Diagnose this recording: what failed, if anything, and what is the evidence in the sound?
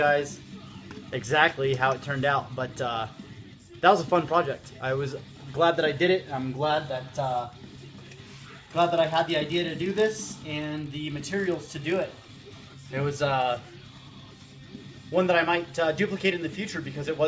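A resampler restarted on every block, from 7.64 to 12.94 s, adds a steady 50 Hz buzz under the signal. At the sample-rate conversion stage, each 20 ms block is converted alone, fitting 44.1 kHz to 16 kHz, so every block edge carries a small discontinuity.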